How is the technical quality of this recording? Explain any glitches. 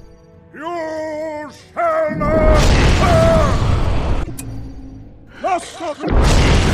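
Two glitches from damaged data in a compressed stream, at 4.19–4.30 s and 6.00–6.10 s: corrupted bytes make the decoder misread frames and resynchronise, producing brief blips.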